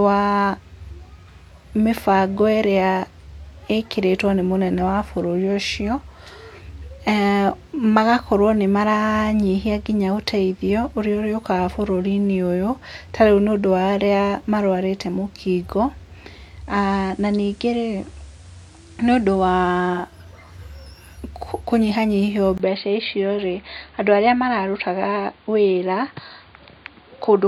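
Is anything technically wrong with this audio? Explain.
Yes, there are two faults, both in the second half of this speech clip.

From 16.47 to 20.23 s the audio shows digital radio blending to analogue. The receiver lost its digital stream and cross-faded over about 428 ms to the station's FM broadcast. The level drops by about 2 dB, and hiss rises to roughly 30 dB below the speech. It is a gradual fade with hiss, not an abrupt change, and the full sound returns at 20.23 s.

From 22.58 s to the end the sound turns dull and boxy after a 20 ms silence at the switch. This is most likely an input switched to a poorer device. A new background noise sits roughly 35 dB down, with little change in loudness. Unlike the radio blend, there is no cross-fade and no return. The change is a sudden cut with a short gap, and the band narrows.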